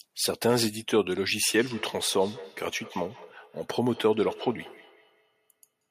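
From 1.5 s to 5.85 s, feedback echo between two devices repeats the speech roughly every fifth of a second, at about -19 dB, showing as faint, evenly spaced spectrogram copies.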